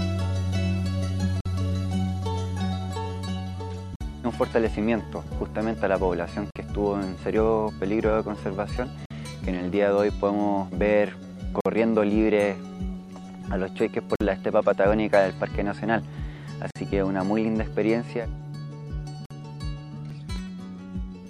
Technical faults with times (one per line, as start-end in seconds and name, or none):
1.41-1.46 gap between chunks
3.96-4.01 gap between chunks
6.51-6.56 gap between chunks
9.06-9.11 gap between chunks
11.61-11.66 gap between chunks
14.16-14.21 gap between chunks
16.71-16.76 gap between chunks
19.26-19.31 gap between chunks
19.59-20.62 CD scratch ticks